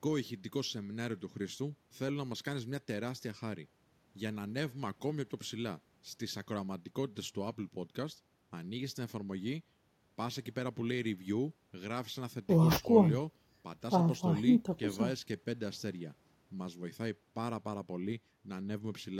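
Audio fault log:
No faults were detected in this speech recording.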